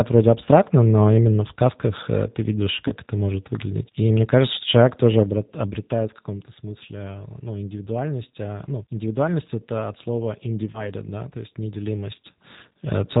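Throughout, the speech carries G.729 codec damage: nothing above 4 kHz, with a rough, synthetic texture consistent with an 8 kbit/s G.729A codec. Two instances of VoIP packet loss concealed by the speech codec follow. From 2.88 to 2.92 s, after "в сказках ты видишь" and before "это может выглядеть", the decoder bridges about 20 ms of missing audio with a brief, fading extrapolation. From 10.72 to 10.90 s, between "это от слова" and "да то есть", the same 20 ms gap leaves weakened or distorted sound for roughly 180 ms while the decoder recovers.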